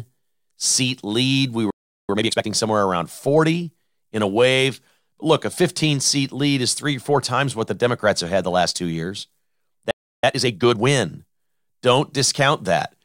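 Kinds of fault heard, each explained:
Playback stall: the speech cuts off mid-flow into silence, for about 0.38 s from 1.70 s and about 0.32 s from 9.91 s, then carries on. The player likely ran out of data or had its output thread blocked until it recovered.
Time-compressed catch-up: right after each gap the speech sounds hurried at its normal pitch. It runs at twice normal speed from 2.09 to 2.47 s and 1.5 times from 10.24 to 10.88 s, as small pieces are cut out and cross-faded to clear the backlog.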